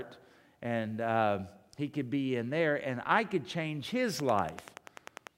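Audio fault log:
4.20–5.28 s, train of clicks: likely interference or a struggling interface injecting pulses, giving around ten regular, near-identical clicks at 10.3 per second, popping well above the speech.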